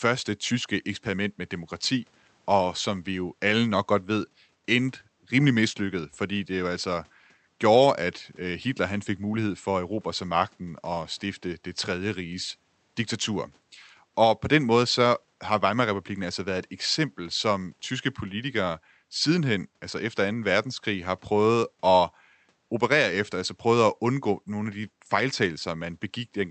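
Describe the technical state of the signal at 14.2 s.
At 14.2 s the signal is intact, with no fault present, only the quiet room noise sitting about 45 dB below the speech and the ordinary character of the call path's Opus coding.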